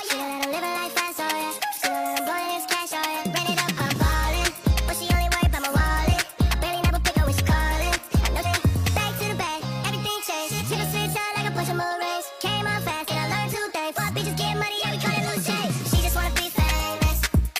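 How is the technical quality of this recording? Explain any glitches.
There is one glitch. A stream segment skipped at 8.41 to 8.46 s: the sound jumps abruptly forward with a brief blip, and the continuity breaks. The likely cause is one chunk of a segmented stream failing to load, so the player resumed at the next segment and left a gap in the programme.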